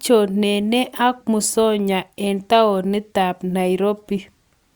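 No technical faults can be heard anywhere in this recording.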